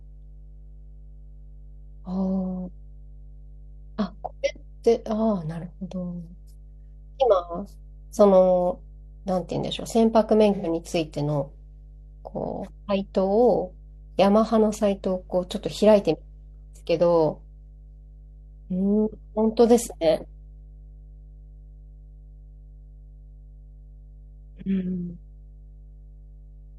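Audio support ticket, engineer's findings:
Steady low drone under the speech for the full clip, about 20 dB below the speech level. Mains hum at 50 Hz with low harmonics. Probable ground loop or nearby transformer coupling the power line into the signal.

Smeared, phasey patch at 10.55–10.66 s, about 0.1 s long. AAC frame loss with concealment. The decoder rebuilt the gap from the last good spectrum, with scrambled signs or interpolated energy. Duration points to two lost frames, roughly 85 ms of audio. Check network or stream delivery.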